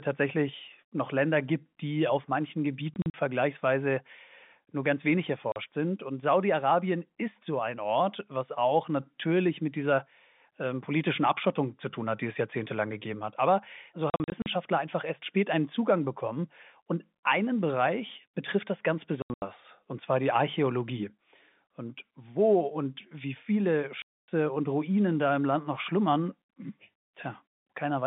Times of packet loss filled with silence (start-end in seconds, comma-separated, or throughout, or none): 2.94-3.14, 5.52-5.56, 14.10-14.46, 19.22-19.42, 24.02-24.28